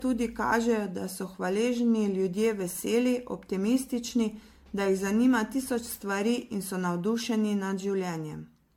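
Throughout the speech the sound is swirly and hollow, with smeared, softened consonant attacks and a watery, holed-out texture, though content still reaches up to about 19.9 kHz. That combination points to generation loss, most likely from the audio being decoded and re-encoded with MP3 around fifteen times at something like 96 kbit/s, each pass quantising on a shifted frame grid so the noise and spectral gaps pile up.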